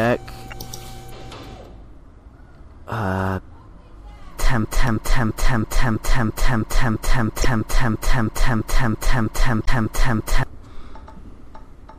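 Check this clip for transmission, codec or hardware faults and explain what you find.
Three kinds of fault are present: codec damage throughout, four brief corruption events, and a long repeating loop.

Across the whole clip the audio sounds watery and swirly, with the treble cut away and attacks smeared. This MP3 compression is plainly audible and fits a low bitrate of around 64 kbps. The encoder ran short of bits, so weak frequency lines drop in and out from frame to frame and the top end is removed at a fixed point. Unlike corruption, this coloration is continuous rather than confined to moments.

Damaged data in a compressed stream appears four times: 0.51 to 0.53 s, at 4.87 s, 7.42 to 7.45 s, and 9.63 to 9.68 s. Each is a short chirp, click or hole where the decoder misread frames and hunted for the next valid header, often skipping ahead. These are abrupt, isolated breaks lasting a few tens of milliseconds at most. 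That separates them from the steady compression smearing and from the sustained repetition of the loop.

From 4.65 s to 10.43 s, a piece of about 0.33 s repeats exactly, back to back, 18 times. This is a broken-record loop. Its likely cause is a player or stream stalling and resending the last fragment it held, so the audio meant for those seconds is lost. It differs from a dropout or corruption glitch because the same fragment returns identically for almost six seconds, rather than breaking once. Three of the corruption events fall inside this span.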